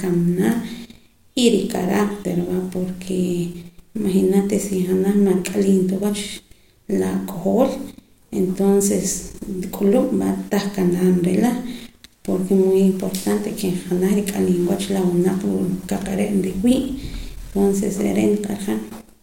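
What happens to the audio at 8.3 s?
Nothing goes wrong at 8.3 s; the speech carries on intact through that moment.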